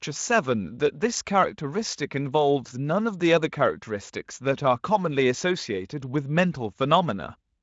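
Speech carried over a Speex link at a high-quality setting, with content ending near 7.6 kHz as that wideband path allows; no technical faults detected.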